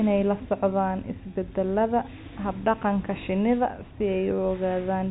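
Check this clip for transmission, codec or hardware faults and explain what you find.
No faults can be heard anywhere in this speech.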